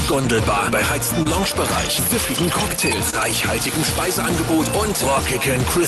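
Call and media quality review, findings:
Clock drift between sender and receiver, throughout. Small uneven timing hiccups across the whole clip. Sender clock runs slow, around 1.5 percent. Jitter buffer keeps draining. Receiver repeats short pieces to cover the gap.

Short stall from a late packet, 1.23 to 1.27 s and 3.10 to 3.15 s. Sound held too long, about 26 to 27 ms each, slight buzz or dip. Packet arrived late, buffer ran empty, last sound stretched. Nothing lost. Opus path above 12 kHz cut.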